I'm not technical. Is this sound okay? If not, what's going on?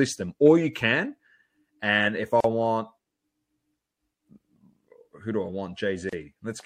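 No. The speech was most likely squeezed hard with MP3 compression, which saves space by throwing away parts of the sound it judges you won't miss. Here that is plainly audible throughout: faint details flicker in and out, giving a watery, swirly quality. The sharp s sounds pick up a metallic edge, and the starts of sounds come out smeared.

There are also two examples of a gap at a join of encoded pieces. The recording was compressed in separate chunks and then stuck together without trimming the bit of silence each chunk carries at its edges. You hear the voice suddenly drop out and then continue exactly where it left off. The first dropout runs from 2.40 to 2.44 s, about 39 milliseconds, right after "and if i". The second runs from 6.09 to 6.13 s, about 33 milliseconds.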